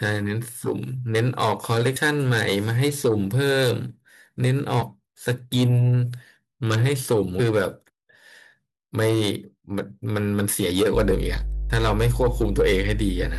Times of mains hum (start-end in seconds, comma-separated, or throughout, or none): 10.94-13.38